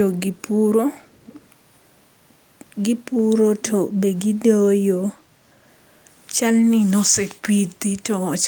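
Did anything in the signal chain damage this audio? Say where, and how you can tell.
Yes: echo leak in call processing, 0.37–0.42 s and 1.02–1.47 s; a faint copy 453 ms behind, likely incomplete echo cancelling, shows as ghost harmonics.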